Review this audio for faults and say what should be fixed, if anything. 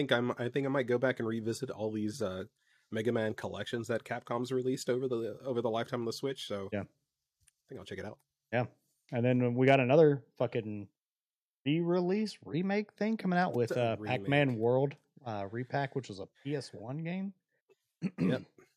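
Microphone overload at 9.67 to 9.75 s, right after "and then we": the input was likely set too high, flattening peaks about 1 dB over full scale, with around one percent of samples clipped and a harsh crackle.

Microphone volume stepped down at 10.38 s: the call software likely reacted to that clipping by cutting input gain, so voice and background suddenly drop about 3 dB.

Set the microphone input lower before recording so peaks stay below full scale and the software never needs to reduce gain mid-call.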